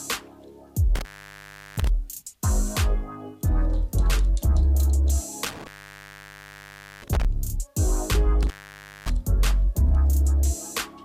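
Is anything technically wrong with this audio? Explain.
Yes. Intermittent contact occurs at 0.95–1.87 s, 5.45–7.25 s and 8.43–9.10 s. A loose connection breaks for about 0.72 s, 1.35 s and 0.56 s, so the sound drops to faint hiss, with crackle at each break.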